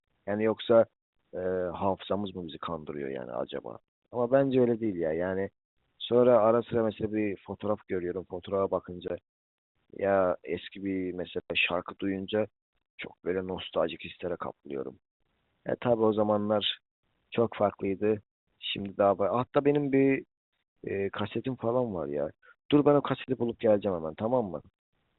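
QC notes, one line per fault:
3.80 s, 9.08–9.10 s, 11.40–11.50 s and 23.24–23.28 s, packet loss filled with silence: the speech drops into dead holes of about 40, 20, 100 and 40 ms, each with hard edges. Lost packets were replaced with silence, and the even lengths point to 20 ms packets. Above the holes, the G.711 telephone coding gives the expected narrow band.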